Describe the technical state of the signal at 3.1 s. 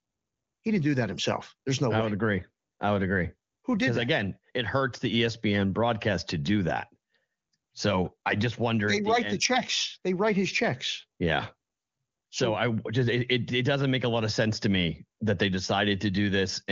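At 3.1 s the audio is intact, with no fault present, and the AMR wideband (HD Voice) coding at 23.85 kbit/s leaves at most faint codec damage there.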